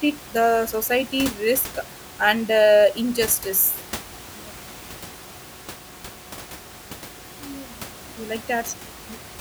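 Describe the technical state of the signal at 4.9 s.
At 4.9 s the speech signal is intact, with only the room's own background noise audible at about 18 dB below the speech level.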